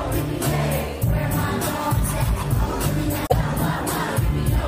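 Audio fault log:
3.25 to 3.34 s, damaged data in a compressed stream: a brief glitch lasting about 80 ms breaks into the sound. Part of the compressed data at this point is corrupt, so the decoder cannot read those frames properly. It outputs garbled values for them and then has to hunt for the next valid frame header before normal decoding resumes.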